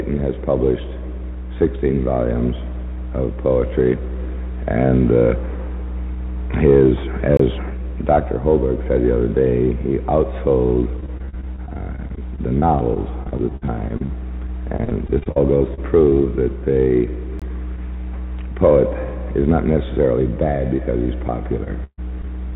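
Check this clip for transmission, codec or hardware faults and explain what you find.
There are four kinds of fault here, all from the transport side. The whole clip also has nothing above 4 kHz, which fits a narrowband call codec like G.711 A-law at 64 kbps.

Gap between chunks: at 7.37 s and again at 17.39 s there's a hole of about 23 ms, exactly 10 s apart. That spacing points to the audio being handled in 10-second chunks, with silence left at each join, from padding or a late chunk start. Nothing is lost, but you hear a short hole right at each boundary.

Repeated packet loss (robotic sound): from 11.00 to 14.11 s and again from 14.77 to 16.15 s, packets keep going missing. There are a couple of dozen gaps in the first stretch and around a dozen in the second, the longest about 51 ms and 42 ms. The receiver patches each hole by extending the previous sound, so about 15% and 19% of those spans are synthetic. 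That's what gives the choppy, robotic texture.

Short concealed packet loss: at 20.77–20.80 s, 21.64–21.68 s and 22.22–22.27 s, roughly 20 ms of audio goes missing each time. The decoder fills it by continuing the last bit of sound and then blends back in, so each one comes across as a tiny smear or wobble. The last one also stretches the timing by a hair.

Burst of packet loss: from 21.84 to 22.00 s, about 140 ms is gone in one go. The concealment holds the last sound and fades it as the gap drags on, and the final 50 ms or so go fully silent. So you get a short held buzz or hiss dying away, and then the audio resumes further along with that slice missing.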